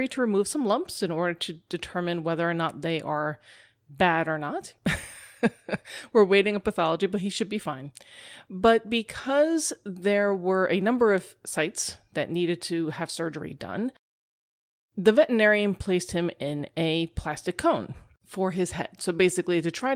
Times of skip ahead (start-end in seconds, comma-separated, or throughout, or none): none